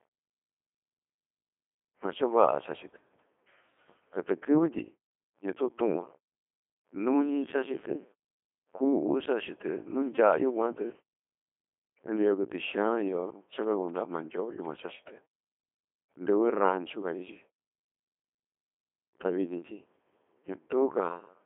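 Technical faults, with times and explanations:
Throughout: Codec 2 vocoder. The speech is resynthesised from sine waves rather than the original waveform, so it sounds buzzy and robotic, with nothing above 3.6 kHz, at about 2.4 kbit/s.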